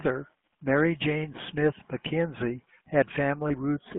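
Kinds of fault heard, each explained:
GSM full-rate codec: the speech is rebuilt from a vocal-tract model driven by sparse pulses, giving a buzzy, gravelly roughness and a telephone band of roughly 150 Hz to 3.4 kHz.
Lost GSM frames: at about 3.48 s a single 20 ms frame is lost and filled from the previous frame, leaving a brief rough, metallic ring.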